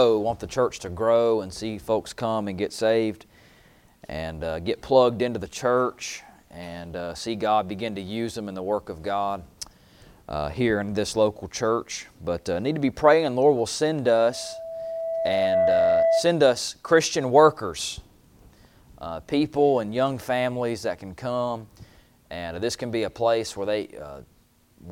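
Loudspeaker feedback squeal from 14.13 to 16.33 s: a 660 Hz tone swells over about a second and a half to roughly 5 dB above the audio, a bright horizontal spectrogram line with a ballooning waveform envelope.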